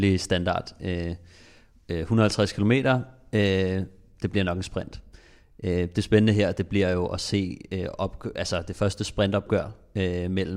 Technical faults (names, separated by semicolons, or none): none